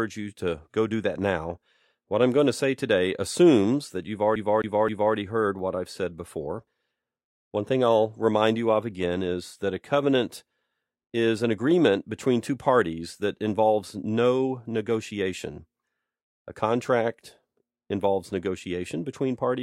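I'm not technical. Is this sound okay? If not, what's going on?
No. From about 4.35 to 5.15 s, right after "today assumes that you've" and before "heard what I've said", the speech gets stuck: a slice about 0.26 s long plays three times in a row, each with a tiny silent blip at the jump. That is a CD stuck on one turn, where a scratch keeps throwing the player back to the same spot. The even, machine-like repeating of the same slice sets it apart from a dropout, which would leave a gap instead.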